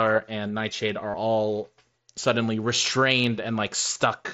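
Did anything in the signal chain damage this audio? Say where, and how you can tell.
Yes. Concealed Bluetooth headset packet loss at 1.11–1.14 s before "all suddenly" and at 3.94 s: the receiver repeated recent waveform over the lost headset-link packets, producing a brief buzzy hold.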